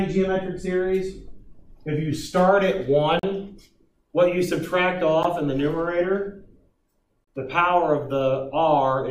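Three short, hard-edged dropouts into silence cut through the sound at 3.19 to 3.23 s, at 5.23 s, and at 7.25 to 7.27 s, lasting roughly 39, 12 and 29 ms. They are gaps between stream segments, spaced about 2 s apart: mismatched segment timestamps leave holes that the player fills with silence, and nothing is lost.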